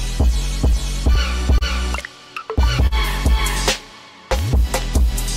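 Throughout, clock drift between sender and receiver, with the sender running roughly 2 percent slow, keeps draining the buffer, causing uneven small repeats that show as brief duplicated waveform segments. At 1.58 to 1.63 s, a short stall from a late packet holds the sound for 28 ms, visible as a frozen, flat spectrogram slice. Nothing is lost, but later audio arrives 28 ms late. At 2.87 to 2.93 s, a second stall stretches the sound by 45 ms, showing a longer smeared band.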